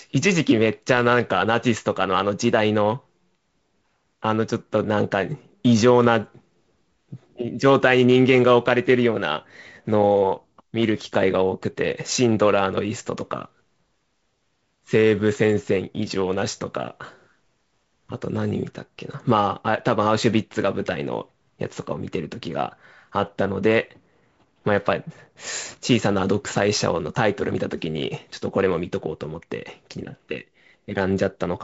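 No technical faults occur in this speech, which has the lightly noisy sound of G.722 wideband telephone coding, with nothing above about 7.7 kHz.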